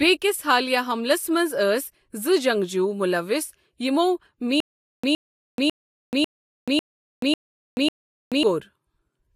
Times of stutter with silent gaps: 4.60-8.43

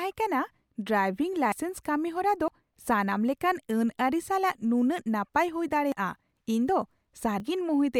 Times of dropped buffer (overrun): 1.52, 2.48, 5.92, 7.40

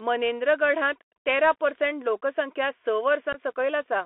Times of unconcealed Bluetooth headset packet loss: 1.17, 3.33-3.39

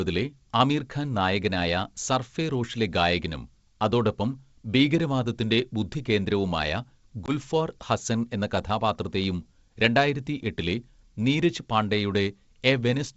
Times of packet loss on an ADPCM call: 7.26-7.32

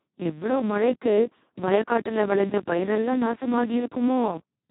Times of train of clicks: none

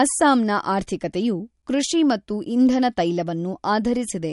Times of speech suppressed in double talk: none

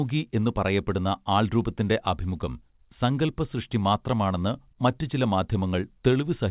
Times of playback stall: none

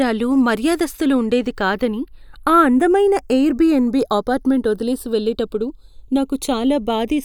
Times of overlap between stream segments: none

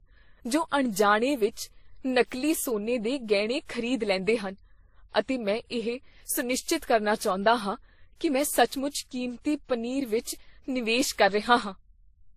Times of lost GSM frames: none

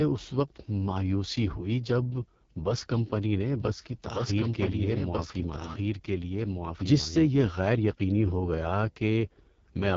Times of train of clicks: none

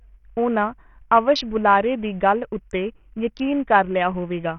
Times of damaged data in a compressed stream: none

